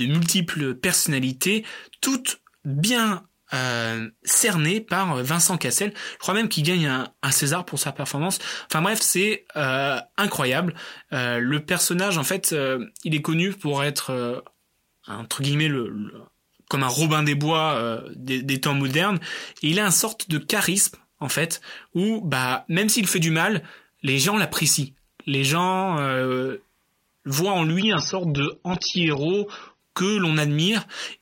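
At 27.8 s, just after "voient en", the audio switches abruptly to an adaptive stream at a lower bitrate. Treble above 6.3 kHz vanishes and codec smearing rises, consistent with a drop to roughly 24 kbit/s AAC, until 29.8 s. Unlike a network dropout, there is no gap.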